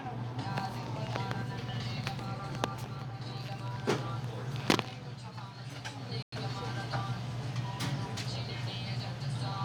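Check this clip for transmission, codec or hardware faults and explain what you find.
One fault turns up: a Bluetooth stall from 6.23 to 6.33 s. The wireless link likely lost packets to interference, so the receiving end's buffer emptied and playback had to wait for the retransmitted audio before continuing. In the sound, this leaves a hard gap of about 0.1 s of complete silence, a clean dropout with no fade on either side, after which the audio carries on.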